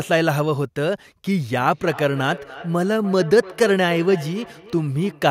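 Feedback echo between two devices runs from 1.39 s to the end of this speech clip: each word returns roughly a third of a second later, peaking about 17 dB below the speech, because a second device in the room replays the call into a microphone whose echo canceller cannot remove sound it did not play itself.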